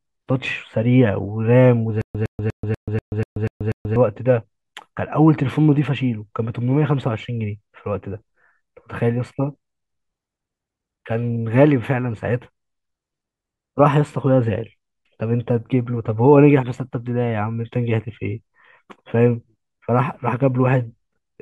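From 2.01 to 3.96 s, a stutter with silent gaps: a 111 ms burst repeats eight times, each followed by 133 ms of flat digital silence, likely from a stalling stream.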